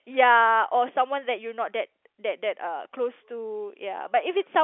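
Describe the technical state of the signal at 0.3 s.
At 0.3 s the speech is intact, carried over a G.711 telephone line that passes roughly 250 Hz to 3.4 kHz, with no fault present.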